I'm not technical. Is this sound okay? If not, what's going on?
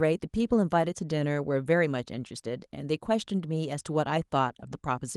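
Yes, it sounds fine.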